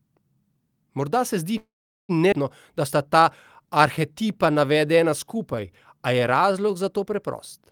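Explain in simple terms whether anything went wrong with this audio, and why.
Three things go wrong in this speech, all tied to how the call's audio arrived and was played back.

Call audio freeze, 1.57 to 2.11 s: right after "se zdi" the sound stalls for about half a second. The last sound is stretched into a short fading buzz, then nothing for roughly 0.4 s. The likely cause is that the incoming audio got held up and the receiver ran out of material to play. Unlike a skip, nothing is lost here. The speech resumes exactly where it stopped, just later.

Skip ahead, 2.31 to 2.34 s: shortly after the same "se zdi", the opposite happens. Roughly four tenths of a second of speech is simply gone, and the two sides are joined almost seamlessly. What tells it apart from the freeze is a sudden jump forward with content missing, not a pause filled with a fading buzz.

Jitter buffer slow-down, 3.62 to 7.16 s: here the speech plays at about 91 percent of normal speed, and about a third of a second is added over that stretch. 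The receiver is quietly repeating tiny slices of the sound to build up a safety reserve. The pitch stays the same, so it sounds drawn out rather than deeper. That sets it apart from a slowed recording, and unlike the freeze there is no stop or gap.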